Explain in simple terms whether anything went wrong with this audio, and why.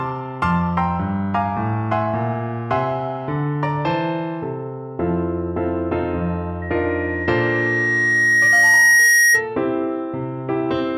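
Yes, there's a loudspeaker feedback squeal from 6.62 to 9.48 s: a single high tone near 1.9 kHz that swells over roughly three seconds until it's louder than the sound itself. A microphone was picking up its own loudspeaker and looping that pitch back. Unlike a steady electrical whine, it grows.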